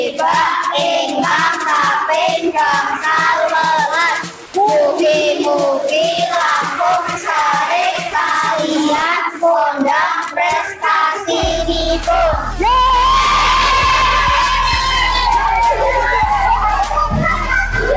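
From 4.46 to 4.54 s, the background gives way to a flat, featureless hiss about 2 dB quieter for 80 ms. This is likely comfort noise in place of the background: the sender paused transmission, and the receiver synthesised noise roughly matching the background's spectrum.

Between 8.94 and 9.02 s, an irregular burst of scratchy crackle cuts through, characteristic of loose connector crackle. A worn or dirty contact rapidly makes and breaks, chopping the signal into brief fragments.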